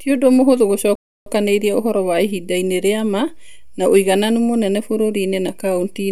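At 0.95 s, after "ũndũ mũhũthũ", a rebuffering stall cuts the speech to silence. The player had run dry. It resumes intact at 1.26 s with "ũhoro wa", adding about 0.31 s.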